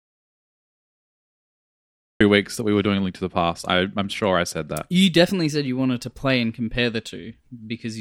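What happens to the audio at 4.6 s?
Nothing goes wrong at 4.6 s: the speech continues intact through that moment with no audible fault.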